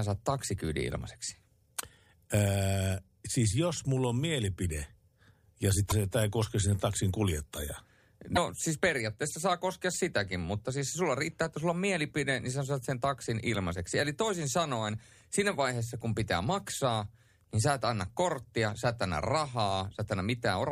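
Damaged data in a compressed stream breaks decoding twice. From 5.87 to 5.92 s, just before "se tämä ei koske", corrupted bytes leave the decoder unable to read the frames, so it loses sync and hunts for the next valid header. The result is a brief disruption of about 50 ms. The same failure recurs from 8.32 to 8.38 s, between "koske sinne taksin kuljettajaa" and "siis periaatteessa saa koskea", as a similar short disruption.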